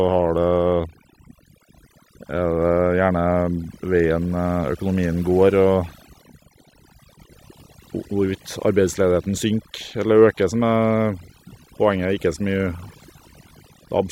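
Throughout, overdone noise removal cuts frequency bands sitting near the noise floor, taking quiet speech detail too, leaving near-silent gaps with twinkling specks.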